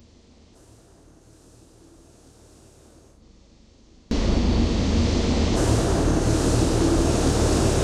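An everyday sound recording where one stereo channel was likely inverted in polarity from 0.0 to 4.11 s, so shared content cancels and the sound drops by about 31 dB, leaving a faint residue.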